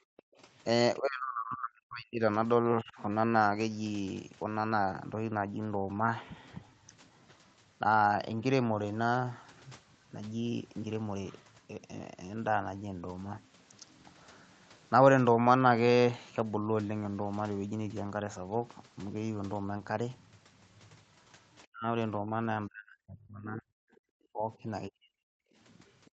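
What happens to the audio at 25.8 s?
Background gated by the echo canceller, from 25.45 s to 26.17 s: while the far end played through the loudspeaker, the canceller clamped the microphone down, so the room sound sinks by up to about 40 dB and nearly vanishes before the clip ends.

The other side's voice leaking through, from 25.71 s to 26.11 s: a very faint second voice, well below the talker, slips through the gap. It is likely loudspeaker sound the echo canceller failed to fully remove from the microphone.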